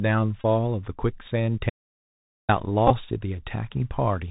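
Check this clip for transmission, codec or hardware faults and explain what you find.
Three faults are audible.

Throughout, the Bluetooth CVSD headset codec is at work. Its one-bit, 64 kbps coding cuts everything above 4 kHz. This leaves scratchy sibilants and a granular hiss.

From 0.41 to 0.44 s, a Bluetooth headset packet is repeated. Lost packets are refilled with the previous one, giving a brief buzz near 267 Hz over about 26 ms. That fits roughly seven packets.

From 1.70 to 2.49 s, there is an audio dropout to silence. For about 790 ms the sound stops to silence, with no room tone. A lost input link is the likely cause.

From 2.87 to 2.93 s, there are more repeated packets. They are scattered over 30 ms, the longest run about 15 ms, and produce short buzzy ticks.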